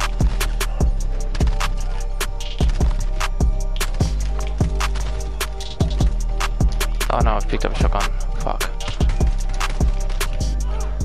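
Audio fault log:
No technical faults are audible anywhere in the signal, with level, continuity and tonal balance holding steady across the whole recording.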